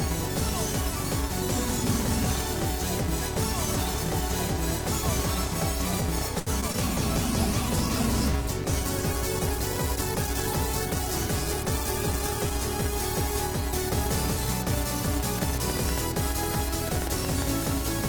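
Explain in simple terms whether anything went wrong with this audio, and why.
Several things went wrong. The first runs through the whole clip. A filter restarted on every block, so each short chunk of audio starts with a tiny tick. These ticks blend into a steady buzz near 345 Hz. That fits a 128-sample block. The buzz gets louder and softer with the sound.

From 6.39 to 6.76 s there is repeated packet loss, which gives a robotic sound. Pieces of audio went missing four times, the longest for about 71 ms. Each hole was patched by stretching the last bit of sound. This makes the audio choppy.

From 7.16 to 14.57 s there is a call bitrate drop. The connection could carry less data, so the audio was squeezed much harder. It sounds muffled and rough, and the high tones are gone. It stays at its worst for about 5.3 seconds.

From 15.38 s to the end there is a train of clicks. Sharp pops arrive about seven times a second, at an uneven pace. 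They stand out clearly above the sound. The likely cause is interference from nearby equipment or a faulty connection or power supply.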